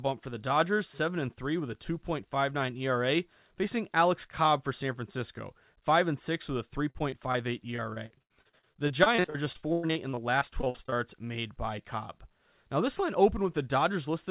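Choppy, robotic speech breaks out from 6.9 to 7.36 s, with four short holes of up to 42 ms, then returns more densely from 7.76 to 10.98 s, just before "made by", with 33 holes, the longest 105 ms. This is repeated packet loss: audio kept arriving lost or late, and each gap was papered over by stretching the previous sound. That covers about 22% and then 29% of those spans, giving the chop. Throughout, the sound stops near 4 kHz, which fits a narrowband G.711 call path.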